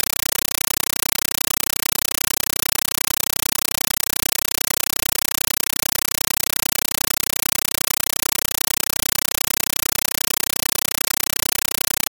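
Compressed stream played as audio, from start to finish: an AC-3 (Dolby Digital) bitstream reaches the output undecoded and is treated as ordinary samples. Each frame's packed data comes out as an 8 ms blast of noise, then zero padding for the rest of the frame, repeating 31.25 times a second. The result is harsh, very loud, chattering static replacing all of the intended sound, with a density that fits a 384 kbps stream.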